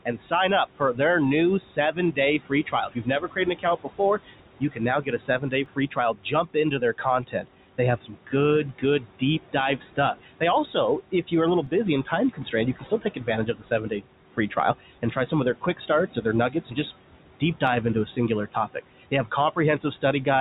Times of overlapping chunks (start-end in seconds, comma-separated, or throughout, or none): 5.66, 11.67, 17.67